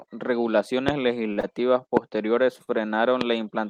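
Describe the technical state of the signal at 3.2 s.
Right around there, from 3.21 to 3.23 s, there's a single loud pop sitting on top of the speech, about 20 dB hotter than the signal, so it really jumps out. The likely culprit is a sudden voltage step or spike, from something like a plug, a switch, static or a driver hiccup, which gets shaped by the downstream circuitry into a sharp thump. The speech carries straight on underneath it.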